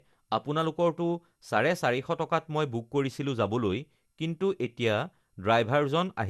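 Generation loss runs throughout the speech, with nothing above 12.6 kHz and a swirly, hollow smear that blurs consonant attacks. The likely cause is repeated lossy re-encoding, around fifteen passes, each requantising on a shifted frame grid so noise accumulates, consistent with MP2 at 128 kbit/s.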